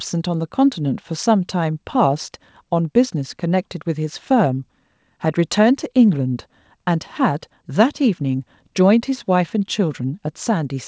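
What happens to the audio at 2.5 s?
Nothing goes wrong at 2.5 s: the speech passes through intact, carrying only the normal 8 kHz band limit of the G.722 call path.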